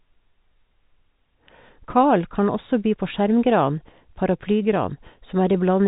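No technical faults can be heard in this speech.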